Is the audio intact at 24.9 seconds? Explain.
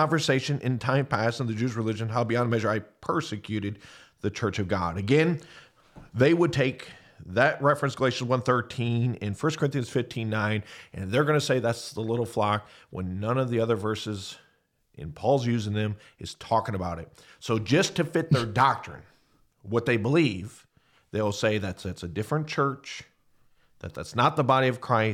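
Yes, the audio is intact at 24.9 seconds, with no fault present at that moment.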